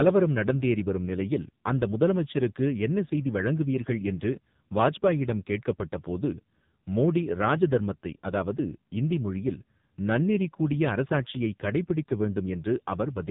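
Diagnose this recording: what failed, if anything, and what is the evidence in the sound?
Codec stage, throughout: an AMR narrowband mobile codec, heavily damaged. Nothing passes above 3.8 kHz, and the speech turns buzzy and synthetic, which fits a low 5.9 kbps mode, unlike a plain low-pass filter.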